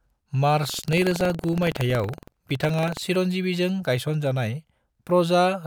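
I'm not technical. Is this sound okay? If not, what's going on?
No. From 0.60 to 3.02 s the speech buzzes roboticly, about 22 times a second. This is buffer tearing: tiny slivers of slightly older audio get spliced in.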